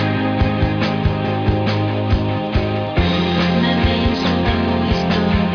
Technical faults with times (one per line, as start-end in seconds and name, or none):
none